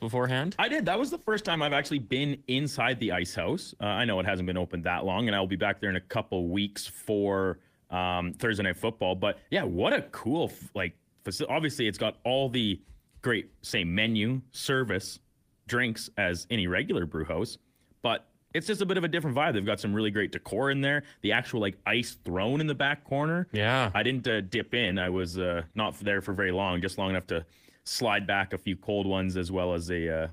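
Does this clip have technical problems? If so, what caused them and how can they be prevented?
Yes. Two call bitrate drops degrade this speech. From 0.43 to 3.95 s the sound turns rough and muffled, consistent with a fall from about 32 kbps to about 13 kbps, worst for 1.46 s. From 22.36 to 27.15 s a milder dip, fitting about 16 kbps, holds its lowest level for 3.98 s. Each time the bandwidth estimate fell, so the encoder coded coarsely and trimmed the high frequencies. A stable, uncongested connection with headroom above the call's normal bitrate prevents this.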